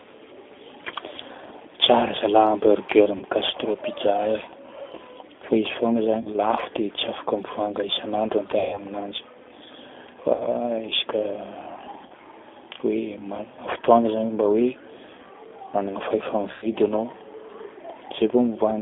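A speech recording carried over a G.729 codec link (the G.729A variant at 8 kbit/s) has been rebuilt from a vocal tract filter, a pitch estimate and a few pulses per frame rather than from the waveform itself. The line passes only about 250 Hz to 3.6 kHz, so the sound is thin and telephone-like, with a plainly audible rough, synthetic edge. VoIP packet loss concealed by the speech codec occurs six times. The decoder filled each gap by extending its last pitch and filter settings at falling gain, so the speech smears into a buzzy tone or coloured noise that fades, and because each frame leans on the previous one, it stays weak or distorted a little past the gap. The gaps are about 40 ms of missing audio at 3.17–3.24 s, 6.21–6.31 s and 12.06–12.12 s, about 60 ms at 10.34–10.47 s, about 100 ms at 16.52–16.67 s, and the longest, about 140 ms at 8.59–8.79 s, which fits roughly seven consecutive 20 ms packets going missing.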